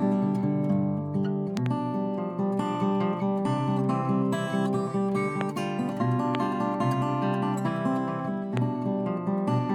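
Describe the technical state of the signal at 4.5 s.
At 4.5 s the signal is intact, with no dropout, clipping, distortion or other technical fault audible at that point.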